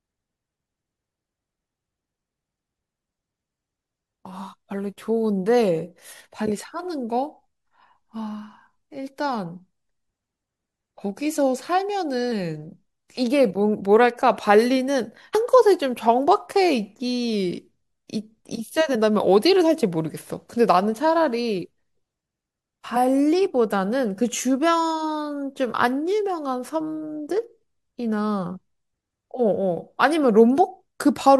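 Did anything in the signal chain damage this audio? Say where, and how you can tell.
Yes, at the codec: compressed frames skipped at 12.31, 15.34, 18.94 and 22.95 s. Each is a jump where the speech skips ahead a few 21.3 ms frames, up to about a tenth of a second.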